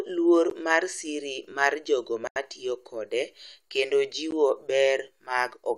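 At 0.50 s the speech drops for about 13 ms into a block of digital silence, and it does the same at 4.31 s. Both are short enough to come across as a tick. The one from 2.27 to 2.36 s runs about 85 ms, which fits a 4096-sample buffer, and it's a proper little hole. Each time the output buffer likely wasn't filled in time, so zeros went out with no fade.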